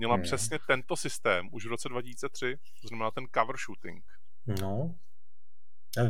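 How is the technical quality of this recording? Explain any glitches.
The recording carries one fault, a DC offset that runs through the entire speech clip. The whole waveform sits shifted off the zero line by a constant of about -34 dBFS, as if a fixed voltage were added to every sample. You cannot hear it as a tone, but it eats into headroom. On a waveform display the trace rides visibly off centre; on a spectrogram it shows as a steady band of energy pinned at 0 Hz.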